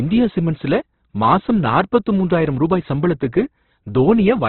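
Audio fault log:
Throughout: Opus compression. Speech is narrowband, with nothing above 4.2 kHz, and sounds grainy and rough. This likely reflects heavy coding near 12 kbps.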